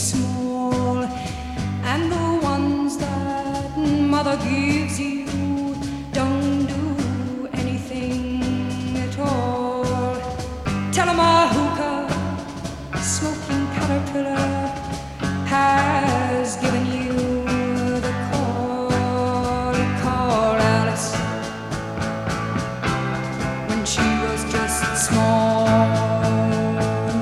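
No technical faults occur at any point in the audio, so there is nothing to describe in time order.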